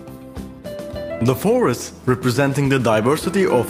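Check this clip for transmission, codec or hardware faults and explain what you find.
One transmission fault stands out: a call bitrate drop from 1.17 s to 2.25 s. The call's bandwidth estimate fell, so the encoder had to spend far fewer bits per frame. The change in texture points to a fall from roughly 64 kbps to about 28 kbps, held at its lowest for about a second. The sound turns rough and watery, then clears. On a spectrogram that stretch looks blotchier and coarser, with smeared upper-band detail.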